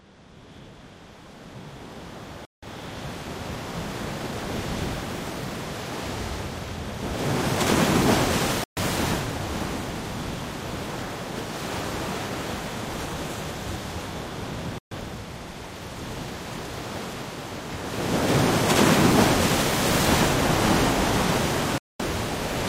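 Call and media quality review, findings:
Digital broadcast dropout, four holes: 2.45–2.67 s, 8.64–8.82 s, 14.78–14.96 s, 21.78–22.00 s. Sound mutes for 128 to 213 ms, then resumes later in the material; content in each gap is lost. Receiver/decoder muting on failed frames. Gap lengths fit whole frames of about 43 ms. About 3 ms fade at each edge, so cuts sound near-abrupt. Waveform: flat line between clean edges. Spectrogram: blank full-band vertical columns.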